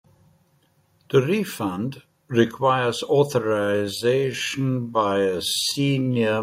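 After "refund requires", at 3.43 s, a time-stretched section slows to 0.56 speed. Pitch holds. It drags, likely from repeated short pieces.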